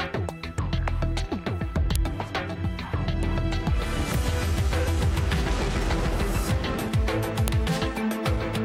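At 1.96 s and again at 7.48 s there is a sharp click, a file header played as audio: header bytes left between joined pieces are decoded as samples.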